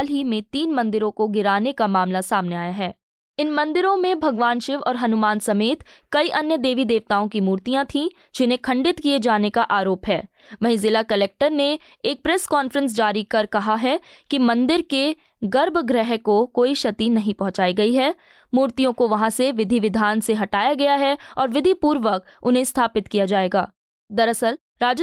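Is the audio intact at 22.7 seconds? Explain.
Yes, the audio is intact at 22.7 seconds, with no fault at that point.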